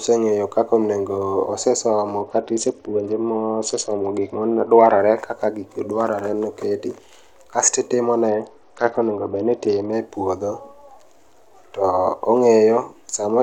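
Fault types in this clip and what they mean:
Bluetooth SBC bit pool drop: From 2.22 to 4.99 s, ending just before "kaka gigi dwaroe", and again from 8.28 to 9.92 s, before "e puodho", the speech turns dull and gritty, its treble dulled over a rough noise. The phone cut the SBC bit pool on a congested link, which sounds like a fall from 28 to 8, near 72 kbps. The top sub-bands lose their bits and the rest are coarsely quantised until the rate recovers.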